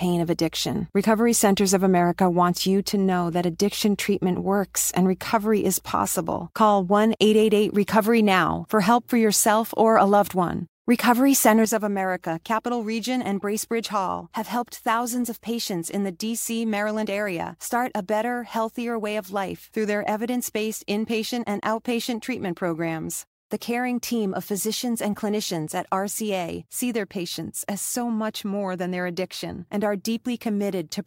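At 11.65 s there's a sudden gain jump: the speech and the background noise both drop by about 7 dB in one step and stay down to the end. It's likely a gain setting applied instantly, with no ramp smoothing the change.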